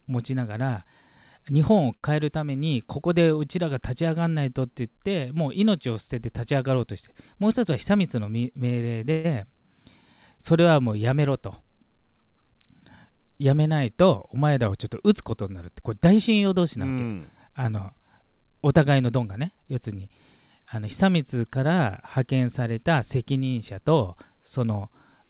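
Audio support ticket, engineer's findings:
Short stall from a late packet, 1.96–2.05 s: last sound held about 66 ms with slight buzz or dip, then resumes in place. Jitter buffer underrun, nothing lost. Shorter than the later freeze.

Call audio freeze, 9.12–9.26 s: sound continues as a fading buzz or hiss for about 126 ms, no drop to silence, then picks up where it stopped. Likely delayed packets emptying the jitter buffer.

Jitter buffer speed-up at 7.50–7.99 s (109%, about 50 ms removed), 13.21–13.67 s (113%, about 70 ms) and 16.41–17.06 s (109%, about 70 ms): speech hurried at unchanged pitch. Pitch-period trimming to drain excess buffered delay; nothing is held.

Band-limited audio, nothing above 4 kHz, consistent with narrowband G.711 A-law at 64 kbps on the call path.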